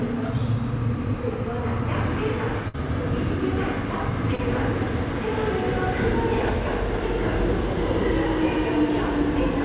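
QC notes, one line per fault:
2.68–2.78 s, burst of packet loss: the last sound is stretched and fades for about 56 ms, then resumes with roughly 60 ms of audio skipped.
4.35–4.40 s, short concealed packet loss: a brief smear where about 32 ms was filled by extending the preceding sound, then crossfaded back into the real audio.
8.54–8.61 s, loose connector crackle: an irregular burst of scratchy crackle as a worn contact rapidly makes and breaks, chopping the signal.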